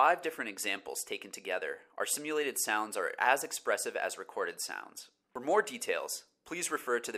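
Nothing technically wrong turns up anywhere in this audio, so there's really nothing to flag here.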